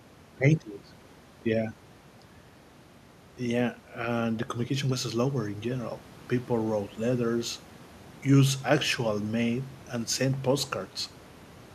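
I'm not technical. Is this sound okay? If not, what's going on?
Yes, no faults here.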